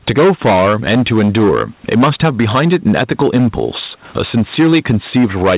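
From start to end, every loud syllable breaks into harsh fuzz. This is hard clipping: the signal is driven about 14 dB past full scale, so a large share of the peaks, roughly one sample in seven, are sliced flat.

Throughout, the gain swings by around 10 dB, leaving the speech squashed and level. This is gain pumping, likely caused by the gain being set far too high and a fast limiter pulling it down on every peak.

Also present all the way through is clock drift between sender and receiver. The sender's clock runs roughly 5 percent fast, so the jitter buffer keeps overfilling and the receiver must keep discarding audio to keep pace.

From 0.36 s to 5.44 s, that drift produces repeated timing corrections. Small, unevenly spaced cuts keep the audio in step, as the playback effectively runs at 105 percent speed.

In the band-limited call audio, nothing is heard above 4 kHz, which points to G.711 mu-law at 64 kbps.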